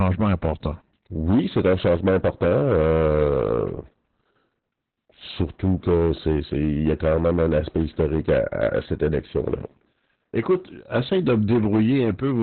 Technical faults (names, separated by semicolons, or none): hard clipping; Opus voice compression